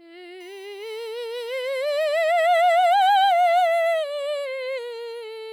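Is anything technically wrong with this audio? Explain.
Yes. From 0.40 s to 3.99 s, USB whine sits under the music. A nearby USB device draws current from the bus in regular 1 ms frames, and those pulses leak into the audio path through shared power or ground. The result is a fixed-pitch tone built on 1 kHz with harmonics, the strongest at 6 kHz. It holds its pitch while the music moves around it, roughly 35 dB below the signal.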